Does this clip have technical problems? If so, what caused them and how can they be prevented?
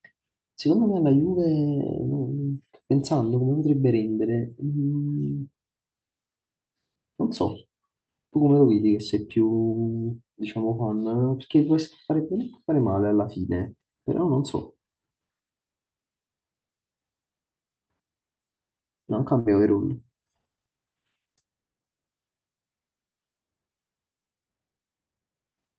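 Yes. A burst of packet loss hits the speech from 19.39 to 19.48 s. The receiver stretched the last sound for about 60 ms and faded it, then skipped roughly 60 ms of audio. On a spectrogram, a frozen, dimming stretch ends in an abrupt jump. The waveform shows a decaying stretch. Turning on Opus in-band forward error correction and using a steadier network connection would prevent this.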